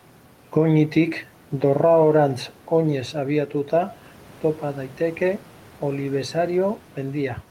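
Nothing goes wrong anywhere in this speech recording, and all you hear besides the talking is a faint bed of room noise sitting about 29 dB below it, which belongs to the space the microphone was in.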